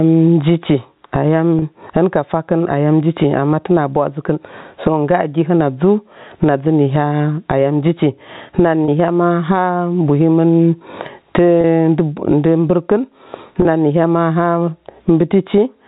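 Right from the start there's gain pumping running through the whole speech clip. The level swings by something like 25 dB. That points to the input gain being set far too high and a fast limiter or compressor likely clamping down on each peak. Loud and quiet passages end up squashed toward the same level.

Then there are four short dropouts from packet loss with pitch repetition, at 1.59 s, 8.85 s, 11.61 s and 13.62 s. Each gap is about 30 ms, which fits a single lost packet. The receiver papers over it by repeating the last pitch period, so instead of a hole you hear a brief held, slightly buzzy snag in the speech before it picks up again. The G.711 telephone coding underneath just gives everything that narrowband phone sound, with nothing above 4 kHz.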